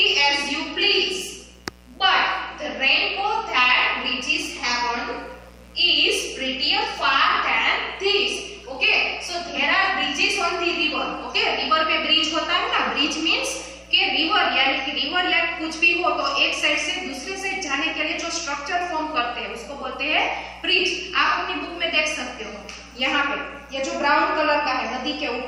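A steady, raspy mains buzz runs under the sound for the whole clip. It sits roughly 25 dB below the sound. It is built on 60 Hz, with harmonics reaching up to several kilohertz. Sharp switching spikes from a dimmer, rectifier or missing shield cause it.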